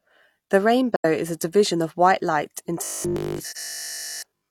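Just before "is a division", from 0.96 to 1.05 s, the speech sinks into a soft-edged gap of about 85 ms. This is AAC frame loss with muting. Compressed frames went missing and the decoder filled their spectrum with zeros. The overlapping transform windows then faded the sound down and back up. A gap of this length fits two lost frames.

From 2.84 s, right after "white light", to the end of the clip, the speech turns into a rigid, metallic buzz with a steady pitch of 50 Hz. It still tracks the rough shape of the talking but no longer sounds natural, and it persists through the whole stretch. The likely cause is robotic sound from repeated short buffers. New audio arrived too slowly, so playback looped the most recent fragment while real audio was skipped. A 50 Hz pitch points to a repeated slice of about 20 ms.

Inside that buzz, from 3.50 to 3.57 s, a second AAC frame loss with muting opens another smooth hole of about 43 ms. 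It fades out and back in. That length fits a single lost frame that the decoder zeroed.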